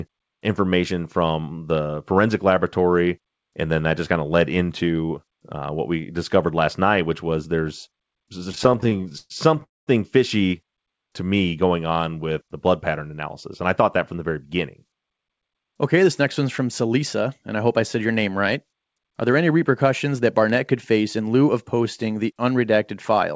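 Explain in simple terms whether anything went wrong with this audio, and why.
Yes, a few things went wrong, all from the way the call delivered the audio.

Repeated stalls (stutter) run from 8.52 to 9.64 s, right after "which was there's there's". The audio kept running dry, so the receiver stretched the last sound to fill 21 small gaps, the longest 118 ms, covering about a third of that stretch. Nothing is lost, but it drags and hiccups rather than stopping once.

A call audio freeze follows at 9.64 to 9.89 s, just before "fishy to me going". This time there is one longer wait of 230 ms, and most of it, 200 ms, goes silent. The likely cause is packets held up on the way. Unlike the stutter, it is a single pause, and the sound then resumes where it stopped.

Jitter buffer speed-up happens at 13.61 to 14.85 s, where the audio runs at 106% speed, and at 20.91 to 21.49 s, just before "of posting the", at 109%. 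Having built up a backlog, the receiver trimmed about 70 ms of tiny pieces each time. The audio sounds briefly hurried but the pitch stays the same. This is the opposite of the stalls: time is removed, not added.

The call codec also leaves nothing above 8 kHz.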